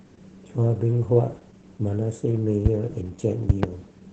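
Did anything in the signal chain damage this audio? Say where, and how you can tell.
Yes. Opus voice compression in the codec throughout: the speech is muffled, hoarse and slightly robotic, with the band capped near 8 kHz, which fits SILK running at about 10 kbps.

Loud pops at 2.66–2.69 s, and a double pop at 3.50–3.66 s, each about 20 dB over the speech, likely an electrical glitch from a plug, switch or static.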